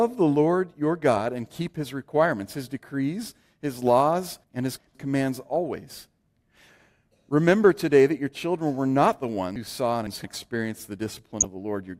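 Chunks out of order appear twice. From 4.44 to 4.95 s, just after "his decrees his laws" and before "commands always", a block of sound about 171 ms long plays roughly two chunk-lengths later than it should. From 9.56 to 10.24 s, after "children were not the" and before "experienced the", a chunk of the same length lands about three places late. Nothing is missing. The playback order was shuffled, so each passage sounds jumbled. In the waveform, each region shows abrupt discontinuities at the chunk edges. On a spectrogram, vertical broadband lines mark the joins, and the formant tracks jump instead of flowing.

A corrupt frame decoded comes at about 11.40 to 11.45 s, right after "experienced the". The damage fits roughly two compressed frames whose bits were altered but were still decoded. Misread gains and codes throw strong energy into the wrong frequency bands, producing a short, loud burst that peaks around -5 dBFS. 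On the waveform it stands out as a brief spike. On the spectrogram it shows as a bright, blocky patch lasting a few tens of milliseconds, unrelated to the harmonics around it.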